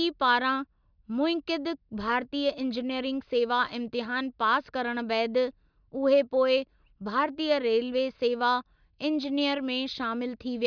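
Nothing in the recording trips any alarm; there's no fault to point to anywhere along the way.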